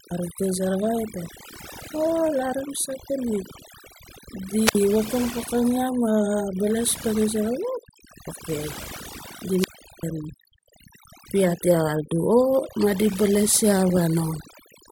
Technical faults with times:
0.00-14.92 overdone noise removal
4.65-4.75 wireless microphone squelch dropout
9.53-10.08 wireless microphone squelch dropout

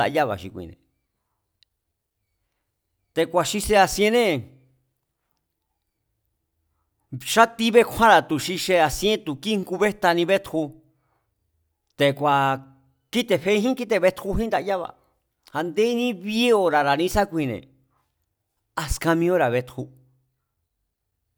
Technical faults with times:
none

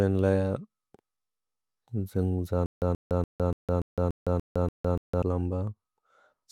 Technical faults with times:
2.66-5.22 stutter with silent gaps

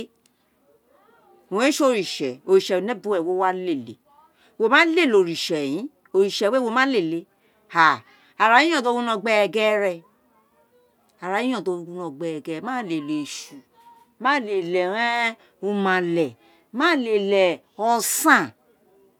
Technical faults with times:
none

